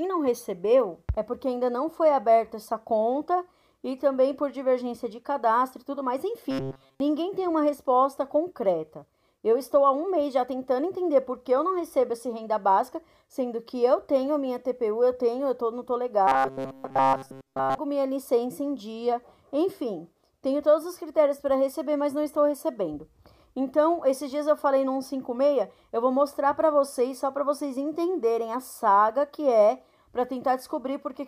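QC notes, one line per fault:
6.51–7.00 s and 16.28–17.78 s, robotic sound from repeated short buffers: audio stops arriving in time, so playback fills the gaps by looping a fragment of about 7.5 ms while the real signal is dropped. This is likely the cause. The loop imposes a fixed 134 Hz buzz on the sound. Most of the first stretch is affected, and the second is replaced entirely, leaving a rigid metallic drone that only loosely tracks the original.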